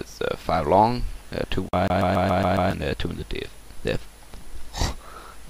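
CD stuck on one turn from 1.88 to 2.71 s: the laser jumps back, replaying one 139 ms slice six times with brief mutes, a rapid, even stutter.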